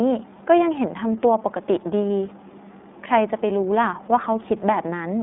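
From start to end the speech runs through the iLBC codec, held to roughly 200 Hz–3.6 kHz with 30 ms frames, which fits about 13.3 kbps. Frame-independent coding leaves it rough and synthetic, not smeared like longer-memory codecs.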